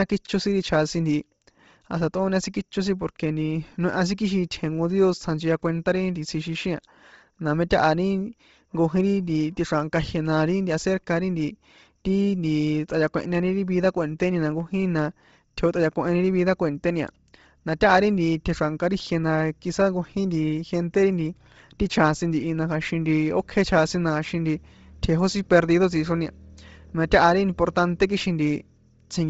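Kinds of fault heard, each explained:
Bluetooth LC3 compression: The speech has a breathy, grainy edge across its upper detail, with heavy damage where high-frequency content has been discarded and filled in with noise, and nothing at all above 7.7 kHz. The likely cause is the LC3 codec of Bluetooth LE Audio running at a low rate. The sound fits around 24 kbps with 7.5 ms frames, where each short transform frame keeps only the strongest parts of the spectrum.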